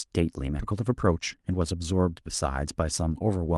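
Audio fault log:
0.59–0.61 s, skip ahead: Right here the speech just jumps forward, and there's basically no gap where it happens. Something like 0.7 s of audio never gets played. It was either lost in transit or thrown away when the jitter buffer overflowed while newer audio was already queued. The two sides get spliced straight together, so you hear a sudden cut in the middle of the flow instead of a pause or a dropout.
0.71–1.74 s, jitter buffer speed-up: Right after the jump, the speech runs hurried for about a second, at roughly 112% speed but with the pitch unchanged. The buffer was holding more audio than it wanted. To catch up, the receiver kept snipping out tiny pieces one or a few pitch periods long, which adds up to about 150 ms trimmed. That's why it sounds rushed and not chipmunky. The call codec path underneath sounds normal, with the top end stopping around 12 kHz.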